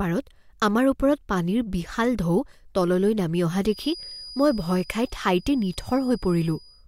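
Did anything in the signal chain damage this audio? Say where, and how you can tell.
Yes. Just after "তললৈ নামি", at 3.62 s, a thin, steady whistle near 4.9 kHz appears behind the speech and holds to the end of the clip, swelling and fading slowly in level while staying well below the voice. This is a feedback whistle, most likely from the acoustic path between loudspeaker and microphone. The loop gain sits right at the edge of instability, so that one frequency keeps recirculating and sustaining itself without building into a full howl.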